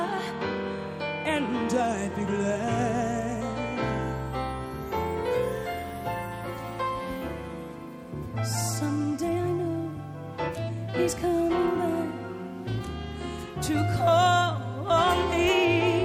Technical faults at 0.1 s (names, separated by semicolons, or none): none